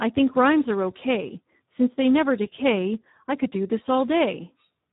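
From the first moment to the end, the speech carries heavy Speex codec damage. It sounds hoarse and noisy, edging toward robotic, because the CELP coder has too few bits to model the excitation properly, which fits a low setting around 8 kbps. Nothing reaches above 3.8 kHz, so the top end is simply gone, leaving that narrow, boxy telephone quality over a rough, buzzy texture.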